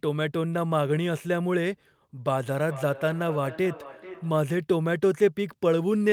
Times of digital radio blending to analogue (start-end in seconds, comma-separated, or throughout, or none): none